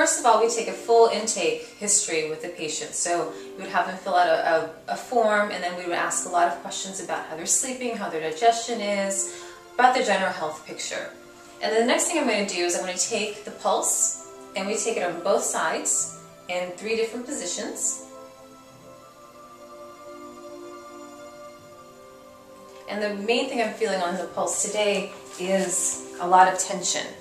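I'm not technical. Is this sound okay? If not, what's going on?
Yes, no faults heard.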